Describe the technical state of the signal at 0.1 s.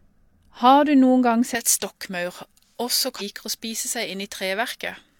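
At 0.1 s the speech signal is intact, with no audible fault.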